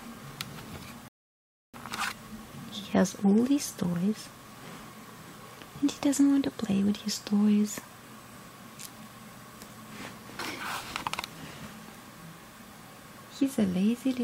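A rebuffering stall runs from 1.08 to 1.74 s. The player had exhausted the audio it had already downloaded, so playback halted and waited for more data to arrive. The sound drops abruptly into silence for about 0.66 s, then picks up again at exactly the point where it broke off. No material is skipped or repeated. The gap simply inserts dead time, stretching the timeline by that pause.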